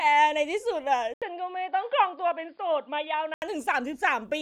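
At 1.14 s the sound drops out for about 80 ms, then returns dull and boxy, with nothing above 5 kHz, a little quieter, and with faint new background noise. This lasts until 3.42 s, when full brightness returns. The likely cause is the input switching to a poorer device. A simple low-pass filter would not explain the gap at the switch, the level drop, or the changed noise floor.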